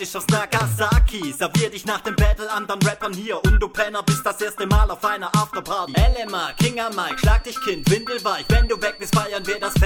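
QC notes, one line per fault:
5.70–9.85 s, feedback whistle: a thin, steady 4.5 kHz tone about 20 dB under the sound, swelling and fading slowly, likely a speaker-to-mic loop sitting right at feedback.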